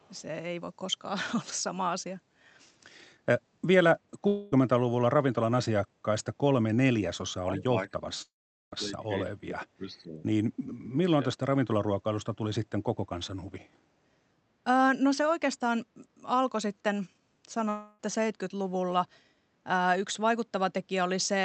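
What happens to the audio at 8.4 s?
At 8.4 s two faults overlap. The first is a long network dropout from 8.22 s to 8.73 s. About half a second of audio never arrived, most likely because of a network gap. The receiver stretched the last sound into a fading buzz or hiss that decays to silence, and the speech resumes at 8.73 s with that part missing. This gap, not a lowering of level, is what sets it apart from suppression.

Around it, from 7.43 s to 10.23 s, runs speech suppressed in double talk, affecting about 2 s in all. The echo canceller likely mistook this talker for loudspeaker echo while the far side was playing, so it turned the voice down by as much as about 20 dB. The voice dips, loses its high end or breaks up in pieces, but unlike the dropout it is not replaced by a continued sound.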